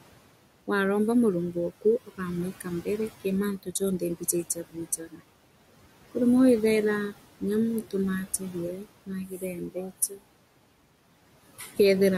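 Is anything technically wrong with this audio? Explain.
Yes. Noise suppressor artifacts run throughout. The suppressor pulls the steady background down by about 18 dB, so the noise sinks between the words and rises under them.

Speech cut by the noise suppressor occurs at 1.53–2.2 s, 2.6–2.87 s, 3.63–5.21 s, 8.39–10.22 s and 11.59–11.79 s. It mistook quiet speech for noise, dropping it by up to about 19 dB, so syllables sound swallowed. The room noise itself sits about 16 dB below the speech.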